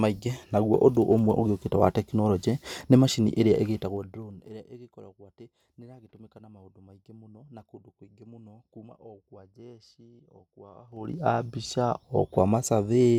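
From 3.63 to 4.61 s, after "tekinoronjĩ nĩ macini ĩrĩa", zipper noise appears. The level falls about 25 dB in unsmoothed 1 dB steps, roughly twenty a second. Each step clicks, so a fine ticking rides the fade. From 10.84 to 11.18 s the level climbs about 25 dB in coarser 3 dB steps, and the zipping returns.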